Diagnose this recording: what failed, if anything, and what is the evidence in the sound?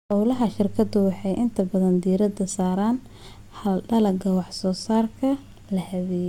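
No fault is audible here.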